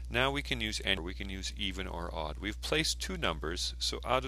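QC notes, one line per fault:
0.94–0.98 s, damaged data in a compressed stream: a short stretch of the compressed bitstream arrives corrupted, so the decoder misreads or rejects the frames covering these roughly 34 ms, loses sync and scans forward for the next valid frame header before it can resume. The result is a brief glitch where the garbled frames are rendered as nonsense.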